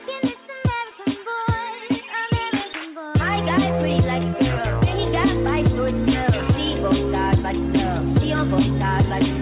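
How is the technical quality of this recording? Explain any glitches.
No glitches to speak of here, just the narrow, phone-like sound of a call line with nothing above 4 kHz, which fits a G.711 mu-law link running at 64 kbps.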